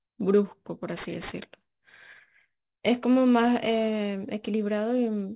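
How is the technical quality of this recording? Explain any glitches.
The recording has one technical fault, present for the whole clip. Aliasing runs throughout: high frequencies fold back around 4 kHz, fitting an unfiltered drop to 8 kHz, so sibilants turn gritty and metallic at roughly 25 dB down, unlike a clean band-limit's dullness.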